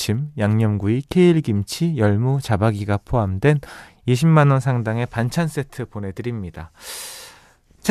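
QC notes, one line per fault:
Nothing stood out on listening to this clip.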